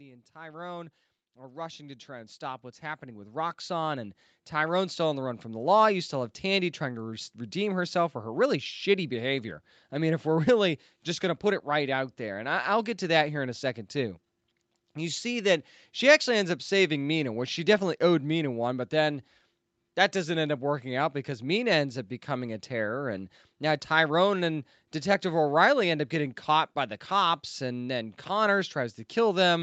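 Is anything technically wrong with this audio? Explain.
Yes. From 0.05 to 5.35 s there is automatic gain rising: the gain control judged the input too quiet and raised its gain by about 19 dB, so speech and background swell together. On a waveform the envelope widens steadily; on a spectrogram everything brightens, including the noise floor. The call path's band limit at 8 kHz also shows as an empty region above that line.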